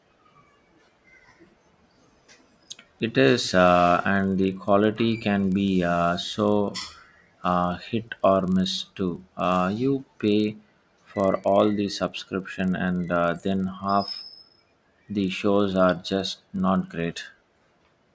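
Speech runs throughout with a steady 25 Hz buzz riding under it. This is a resampler restarted on every block. Each 40 ms block was converted alone, so every block edge carries a small error. The sound fits a 24 kHz to 16 kHz conversion.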